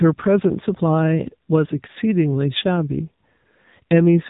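The whole recording has passed through the AMR narrowband mobile codec, which samples at 8 kHz and rebuilds speech from a vocal-tract model driven by a handful of pulses per 5 ms subframe. The coding is plainly audible, consistent with a mode near 8 kbps. Nothing above 3.8 kHz survives, so the speech sounds boxed-in and telephone-like, and the coarse pulse excitation lends it a buzzy, synthetic edge from start to finish.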